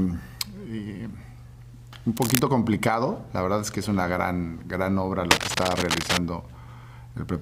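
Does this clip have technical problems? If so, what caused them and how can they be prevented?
Yes. Cable scratch noise appears from 2.17 to 2.39 s and from 5.31 to 6.18 s as rough, uneven scratching about as loud as the sound itself, likely from a worn cable or connector whose contact resistance fluctuated as it moved. Replace worn cables and secure connections against movement.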